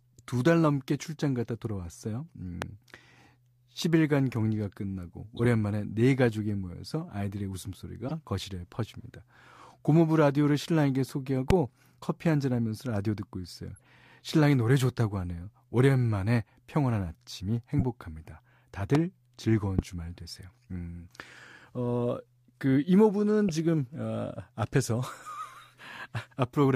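A sudden voltage step, likely from a switch or static discharge, lands on the speech as a sharp loud pop at 2.62–2.64 s, well above the voice, and again at 11.50–11.53 s, 18.95–18.97 s and 19.79–19.81 s, with speech continuing underneath. Between these, damaged compressed frames decoded anyway throw energy to the wrong frequencies. These corrupt frames are heard as short chirps and noise bursts at 5.37–5.46 s, 8.08–8.12 s, 13.75–13.87 s (faint), 17.77–17.83 s and 23.49 s (both loud).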